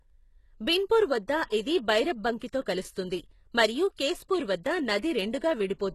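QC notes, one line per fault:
Throughout: HE-AAC compression, likely. Low-rate coding with replicated treble leaves s sounds gritty and lispy, fitting roughly 16 kbps, with nothing above 12.3 kHz.
1.50–1.52 s, 2.39–2.41 s, 3.97 s: pre-echo. Quantisation noise spreads across each coding block, so a brief hiss of about 20 ms precedes each attack, softening it.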